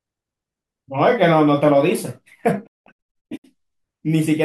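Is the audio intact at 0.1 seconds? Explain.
Yes, at 0.1 seconds the audio is intact, with no dropout, click, distortion or other fault at that moment.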